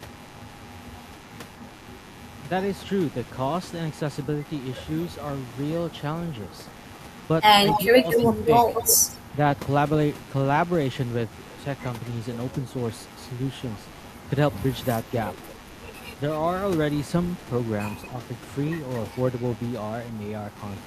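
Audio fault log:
Throughout, computer activity noise: load changes in the machine's processor, graphics or mouse disturb the audio circuit's shared ground, putting a buzzing, roughly 100 Hz pulsing underneath the speech at about 25 dB below it, rising and falling with computer activity rather than with the talker.
7.72–9.17 s, echo leak: likely a far-end loudspeaker whose echo canceller failed to remove what its microphone picked up, so a copy returns 233 ms late at about 5 dB under the speech, a strong doubling of the voice.
7.89–8.66 s, speech suppressed in double talk: with both sides talking, the echo canceller likely could not tell the talker from the echo and turned everything down, so the voice dips by up to about 20 dB and drops out in pieces totalling around 300 ms.
15.5 s, echo leak: a brief scrap of the same 233 ms delayed copy slips through, now faint at about 30 dB below the speech, heard as a ghost of the voice trailing behind it.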